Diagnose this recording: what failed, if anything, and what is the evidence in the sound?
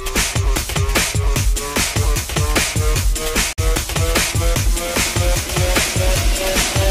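The sound cuts to silence at 3.53 s and returns at 3.59 s, a hole of about 65 ms. This is a Bluetooth dropout, most likely caused by the wireless link to the headphones: packets arrived too late and were discarded, and the gap fits a couple of lost packets. When the sound returns, it has moved on as if it had kept playing through the silence. A driver buffer underrun would instead pause and then resume from where it stopped.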